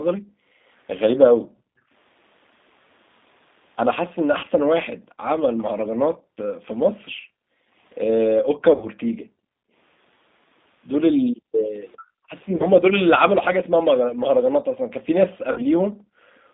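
G.729 coding runs through the whole clip. The speech is rebuilt at 8 kbit/s from a vocal tract filter, a pitch predictor and a few pulses per frame, so it comes across as slightly rough and synthetic. The line band sits at about 200 Hz to 3.7 kHz, leaving the voice muffled and thin, and the codec damage is plainly audible.

Echo leak appears from 4.16 to 4.21 s: a faint delayed copy of the voice, roughly 30 dB below the speech and arriving about 404 ms late. It is most likely the far side's loudspeaker feeding its microphone, with the echo canceller letting a scrap through.

VoIP packet loss concealed by the speech codec hits from 4.39 to 4.46 s, with 40 ms missing. The decoder fills the gap by extending its last pitch and filter at falling gain, so the speech smears into a brief buzzy, fading tone and stays weak for a moment after audio resumes.

Background gated by the echo canceller runs from 4.96 to 9.73 s. 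The room sound drops by as much as about 40 dB, and roughly 3 s of that span is affected. Each time the canceller clamps the microphone while the loudspeaker plays, the background vanishes, then returns when it releases.

A longer concealment runs from 8.74 to 8.87 s. About 80 ms is lost, which fits four 20 ms packets, and the stretched buzz lasts noticeably longer before it decays.

Gating returns from 11.29 to 14.64 s, again down as much as about 40 dB, with roughly 1.5 s of dips.

Packet loss concealment occurs twice more, at 12.56 to 12.66 s and 15.52 to 15.63 s. Each has 40 ms missing and the same short buzzy smear.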